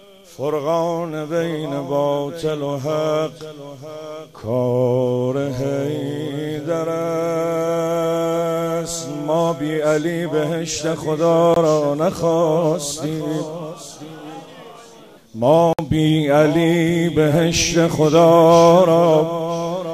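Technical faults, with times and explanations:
11.54–11.56 s and 15.73–15.79 s, block of digital silence: the program likely twice failed to fill its output buffer in time, leaving zeros, the first gap of about 21 ms fitting a 1024-sample buffer, the second about 56 ms. The sound drops out and returns abruptly.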